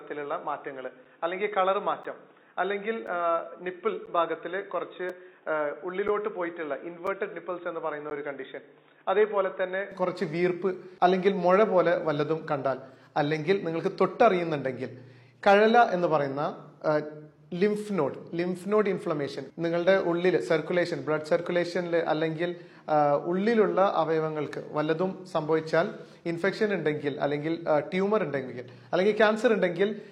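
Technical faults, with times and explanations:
0.0–9.92 s, input switched to a poorer device: Until 9.92 s the sound is dull and boxy, with nothing above 3.8 kHz, a background noise roughly 35 dB below the signal, and a level about 5 dB lower. At 9.92 s it clears up abruptly, with no silence at the change. The narrow band, different noise floor and level shift most likely mean the recording began on a lower-grade microphone or a headset call profile and then moved to the main input.
1.05, 2.03, 3.07, 4.06, 5.09, 6.08, 7.07, 8.10 s, gap between stream segments: Hard-edged dropouts of silence, 3.7 to 11.8 ms long, cut into the sound at roughly one-second intervals. Their regular spacing matches a 1.0 s segment length. At each boundary, the timestamp of the next segment falls slightly after the end of the previous one, and the player fills the gap with silence. The audio is delayed by each gap but not lost, so the sound resumes intact after each hole.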